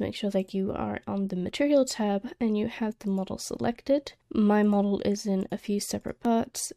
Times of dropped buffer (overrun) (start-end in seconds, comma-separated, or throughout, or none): 3.57, 6.25